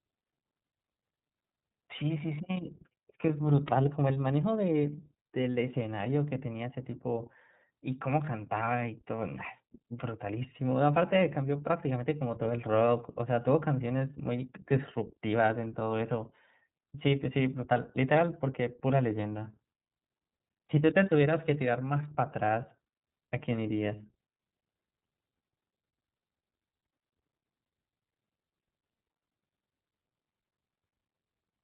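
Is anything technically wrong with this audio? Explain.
Yes. Throughout the speech, the iLBC codec is plainly audible. It codes each frame's excitation independently, and the texture points to 30 ms frames at 13.33 kbps. Nothing above 3.8 kHz passes, so the sound is muffled, slightly rough and synthetic.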